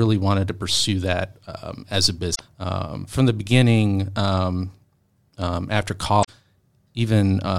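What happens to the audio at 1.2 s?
At 1.2 s the speech carries on cleanly, with no dropout, click, distortion or other break in the audio.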